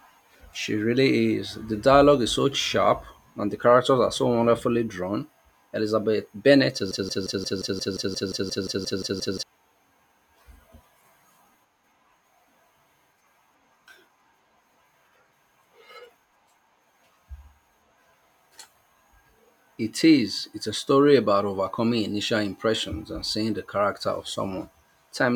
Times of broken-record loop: 6.91-9.43

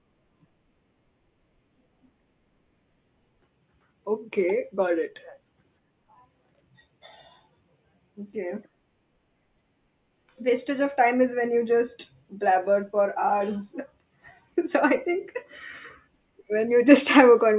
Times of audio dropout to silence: none

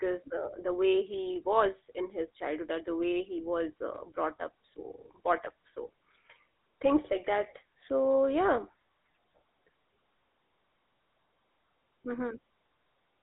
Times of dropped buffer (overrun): none

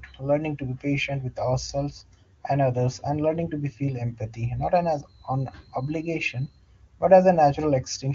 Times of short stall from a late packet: none

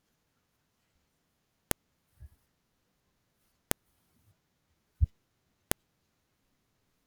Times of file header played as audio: 1.71, 3.71, 5.71

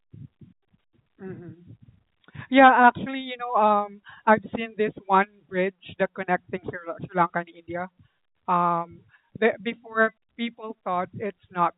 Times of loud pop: none

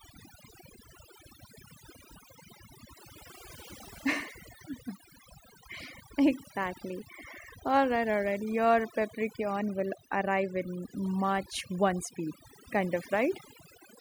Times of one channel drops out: none

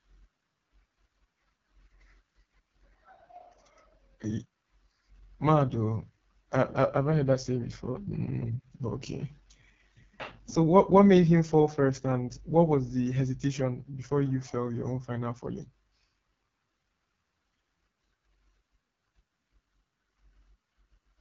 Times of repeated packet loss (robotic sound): none

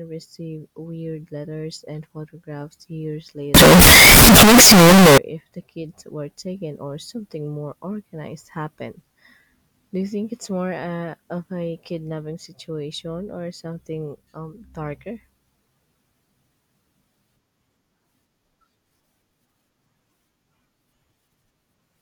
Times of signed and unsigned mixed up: 3.55-5.18

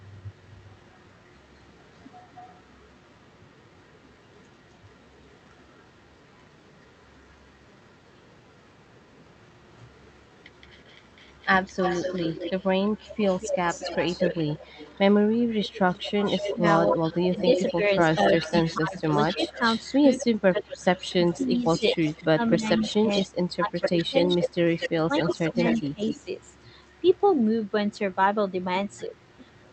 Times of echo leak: 0.12-7.97, 9.93-27.66, 28.97-29.73

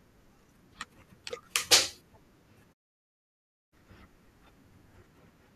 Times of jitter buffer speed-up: none

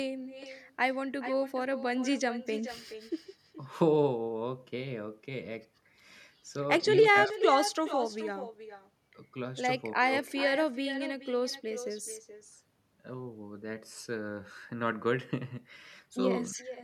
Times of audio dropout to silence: none

